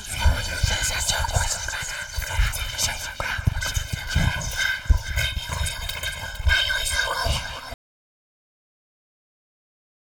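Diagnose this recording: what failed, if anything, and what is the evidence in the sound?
Audio dropout to silence from 7.74 s to the end of the recording. The sound stops abruptly mid-flow and is replaced by silence for the remaining 2.27 s, with no room tone or noise floor at all. That absence points to the input stage rather than the source going quiet: the feed was likely lost through a disconnected device, a failed link or an unintended mute, while the recorder kept writing silence. Whatever sounded after 7.74 s was never captured.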